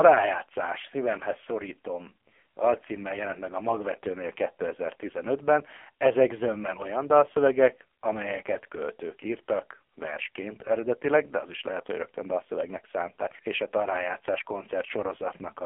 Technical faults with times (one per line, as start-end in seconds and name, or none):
0.00-15.65 AMR narrowband mobile codec